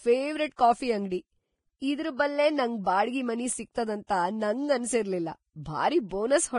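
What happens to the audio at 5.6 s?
A brief wash of hiss smears in just ahead of a sharp onset, from 5.63 to 5.66 s, so the attack sounds softened and blurred. This is pre-echo: the codec spread its quantisation noise across the whole transform block, so noise sized for the loud onset also fills the quiet 33 ms before it.

Around it, the sound is grainy and hissy, with nothing above 10.5 kHz and roughened tones. That points to heavy Vorbis compression, likely at a low bitrate near 27 kbps, where the treble is quantised so coarsely that fine detail turns into noise.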